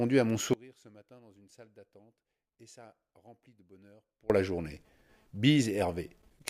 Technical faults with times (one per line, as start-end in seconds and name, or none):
0.53-4.30 audio dropout to a faint residue